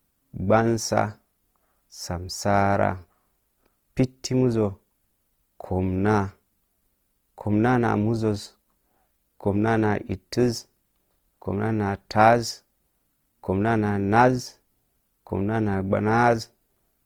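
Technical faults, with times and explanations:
Throughout, Opus compression: an encoder likely running in its CELT music mode at a bitrate that sounds close to 24 kbps cannot afford exact detail, so it fills starved bands with folded or noise-like content, leaving the speech plainly grainy and rough while still reaching past 20 kHz.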